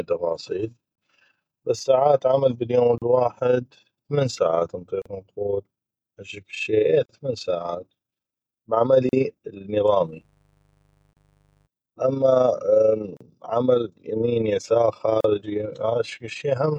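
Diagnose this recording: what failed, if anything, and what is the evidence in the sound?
A fast, rough flutter rides on the speech for the whole clip, giving it a rough tremolo at a rate of around 30 times a second, with the level swinging by about 6 dB. This is overlap-add ripple, from a processing stage that splits the audio into windowed frames and rebuilds it. The frame windows and their overlap don't add up to a constant gain, so the level dips and recovers once per frame.

Short dropouts cut into the running speech every 2 seconds, at 0.95, 2.98, 5.02, 7.06, 9.09, 11.13, 13.17 and 15.21 s. The first lasts about 26 ms and the rest about 38 ms. One falls right after "بس ساعات عمل باليوم", and the speech resumes with "الواحد ثمن ساعات". These are gaps at a join of encoded pieces. The audio was encoded in 2-second segments and joined without trimming, so each encoder's start-up delay and end padding remain as silence.

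From 10.02 to 11.69 s a steady, raspy buzz sits low under the speech, roughly 40 dB below it. This is mains buzz at 50 Hz, entering in the analogue wiring. Its harsh, gritty edge comes from sharp switching spikes twice per mains cycle, which spread harmonics of 50 Hz well up into the kilohertz range, as a dimmer, a rectifier or a missing shield would produce.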